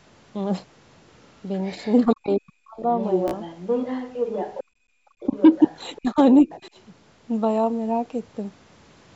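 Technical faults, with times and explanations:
1.64–1.96 s, other side's voice leaking through: a faint second voice, about 30 dB below the talker, is audible, likely loudspeaker echo the canceller did not fully remove.
2.06–2.84 s, speech suppressed in double talk: the talker's voice dips sharply, by roughly 40 dB at worst, for most of this stretch, likely because the canceller attenuated both sides during overlap.
3.0–4.64 s, other side's voice leaking through: a much stronger second voice, only about 10 dB under the talker, runs through this stretch, likely uncancelled loudspeaker echo.
3.28–3.35 s, Bluetooth stutter: a short slice repeats as a brief buzz, covering about 46 ms, which fits three lost packets replaced by replayed buffers before playback resumed.
4.64–4.98 s, background gated by the echo canceller: room sound drops by about 23 dB for roughly 0.3 s as the microphone is pulled down hard, then returns.
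5.2–6.0 s, other side's voice leaking through: a second voice about 20 dB below the talker comes through, likely echo residue the canceller missed.
5.26–5.35 s, speech suppressed in double talk: a slight dip of a few dB in the talker's level lasts about 0.1 s, likely brief double-talk attenuation.
5.98–6.48 s, speech suppressed in double talk: the talker's voice drops by roughly 25 dB over about 0.3 s of this span, likely from the canceller ducking during overlapping speech.
6.5–6.8 s, other side's voice leaking through: faint traces of a second voice, about 25 dB under the talker, are heard, likely residual loudspeaker echo.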